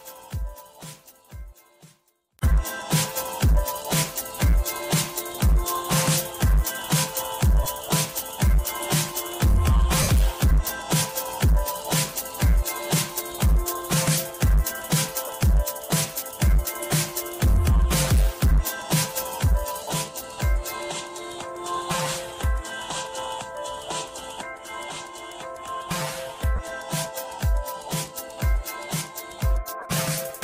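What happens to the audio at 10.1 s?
Lost LE Audio frames, from 10.02 to 10.09 s: about 60 ms of the Bluetooth stream went missing, which fits a run of eight 7.5 ms frames. The LC3 decoder filled the gap by repeating the last spectrum with randomised signs, so tonal sound briefly smears into noise.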